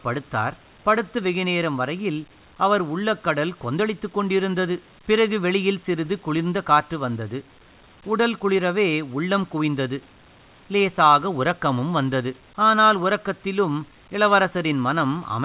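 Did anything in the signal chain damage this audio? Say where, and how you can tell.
No, nothing in the chain has damaged this speech; the top end stops at 4 kHz as expected from a G.711 A-law call path, and the room noise sits about 39 dB below the talking.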